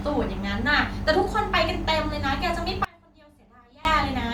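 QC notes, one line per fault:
2.85–3.85 s, audio dropout to a faint residue: the feed was most likely interrupted while the downstream path stayed live, so the speech cuts abruptly for about 1 s, leaving only a faint sound roughly 25 dB below normal before returning mid-flow.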